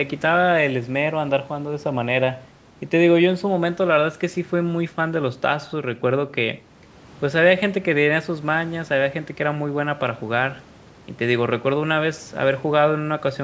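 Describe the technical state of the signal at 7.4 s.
At 7.4 s the speech is intact, with no fault present, and only the normal call microphone processing is audible: the lowest bass is trimmed and nothing reaches above 8 kHz.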